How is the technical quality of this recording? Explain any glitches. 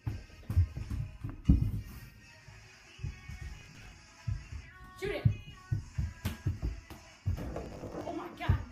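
Two bursts of processor overload crackle mar the recording, at 3.57–3.92 s and 7.65–8.09 s. Missed deadlines for buffers of around 10 ms replay stale fragments, heard as gritty tearing and seen as dense vertical broadband streaks with hard waveform edges.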